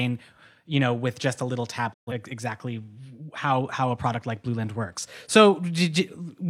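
At 1.92 s the speech fades to silence over about 20 ms and stays muted until 2.12 s, when it returns later in the programme with the intervening stretch simply missing. This is a digital broadcast dropout: the receiver lost the signal or rejected corrupted frames and muted rather than play damaged data. The gap of roughly 128 ms of lost material fits three dropped frames, with the short fade masking the cut.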